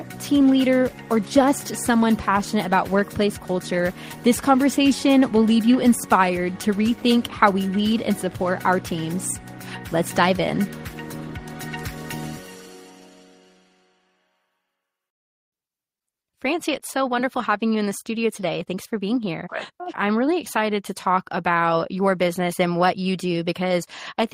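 No technical faults can be heard anywhere in the audio. No dropout, glitch or disturbance interrupts it at any point.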